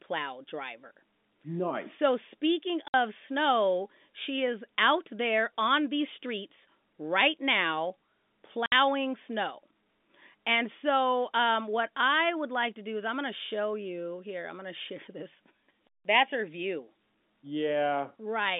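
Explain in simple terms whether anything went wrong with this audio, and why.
The speech drops out twice, at 2.88 s and 8.66 s, with brief silent holes lasting 60 ms each. That is packet loss filled with silence, likely about three lost packets each time.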